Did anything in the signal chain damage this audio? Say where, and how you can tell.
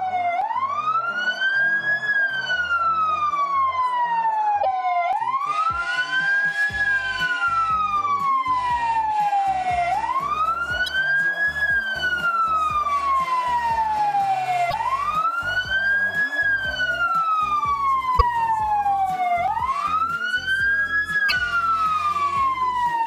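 Yes: damaged data in a compressed stream, heard as short blips at 4.59–4.66, 10.86–10.89, 14.67–14.74, 18.14–18.22 and 21.25–21.32 s. At the codec stage, corrupted bytes make the decoder misread frames and lose sync until it locks onto the next frame header.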